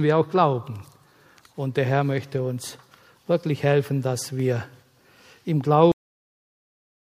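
The audio has a cut-off end: at about 5.92 s it just stops dead in the middle of a sound, with no natural decay or fade. From there to the end of the file it's pure digital silence for roughly the last 1.1 s. That points to the final buffers never being written or played out, so the tail of the recording simply isn't there rather than having been faded or trimmed cleanly.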